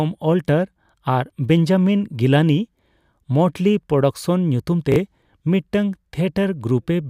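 Speech with chunks out of order at 4.92–4.96 s: two 20 ms chunks play swapped, giving a brief jumbled moment, seen as three abrupt waveform discontinuities and vertical spectrogram lines.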